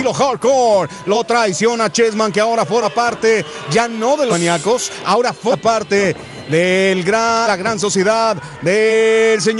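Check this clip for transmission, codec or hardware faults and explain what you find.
Compressed frames skipped, six times: at 1.14 s, 2.81 s, 4.30 s, 5.51 s, 7.46 s and 8.9 s. The decoder never plays whole frames of the compressed stream, either because they are missing or because it rejected them as damaged. The sound therefore jumps forward, losing about 100 ms at 1.14, 2.81 and 8.9 s, about 150 ms at 4.30 s, and about 200 ms at 5.51 and 7.46 s. Those gaps are multiples of a roughly 46 ms frame, two to four frames each time.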